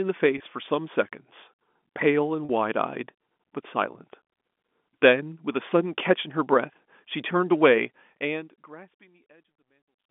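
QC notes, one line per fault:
0.38 to 0.40 s, 2.45 to 2.49 s and 5.70 s, packet loss with pitch repetition: brief held, buzzy stretches of about 20, 40 and 10 ms, where lost packets (gaps that fit 10 ms packets) were bridged by repeating the last pitch period before normal speech resumed.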